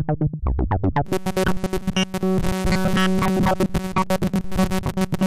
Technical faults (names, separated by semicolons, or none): robotic sound from repeated short buffers